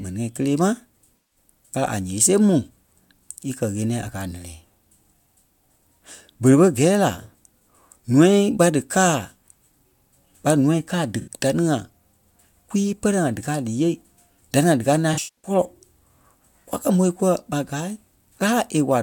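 At 1.16 s, AAC frame loss with concealment sets in for about 150 ms. The decoder rebuilds missing frames from the last good spectrum, so the speech turns smeared and phasey. At 11.20 s a shorter gap of 64 ms leaves a brief noisy patch. From 15.13 s to 15.51 s, 256 ms of frames drop out in scattered bursts. The longest run is about 150 ms, heard as a washy, blurred stretch.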